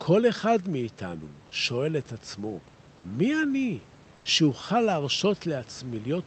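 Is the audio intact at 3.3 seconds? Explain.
Yes, at 3.3 seconds the speech is intact, with no dropout, glitch or distortion at that moment.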